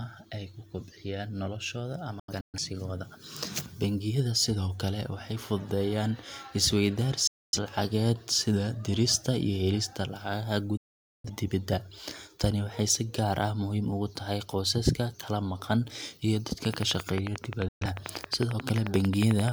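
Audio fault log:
2.19–2.58 s, 7.27–7.59 s, 10.77–11.30 s, 17.68–17.87 s: digital broadcast dropout. The receiver lost valid frames and muted behind a 3 ms fade, so the sound drops abruptly to silence. The first dropout breaks into several short holes.
16.65–19.49 s: train of clicks. Interference from nearby equipment likely injects a regular pulse at 11.3 per second, about 30 clicks in all, ticking at around 15 dB above the sound.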